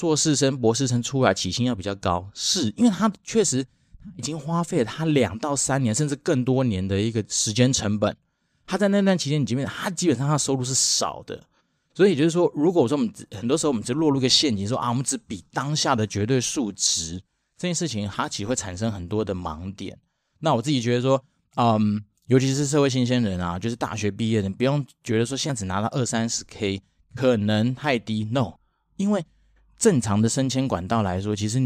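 At 25.5 s and again at 28.56 s the speech jumps forward, the first skip losing roughly a twentieth of a second and the second roughly a tenth. This is most likely a dropped buffer (overrun): the recording software fell behind, the hardware overwrote unread samples, and the surrounding audio was spliced straight together. Unlike a dropout, no silent gap appears. The sound simply leaps ahead.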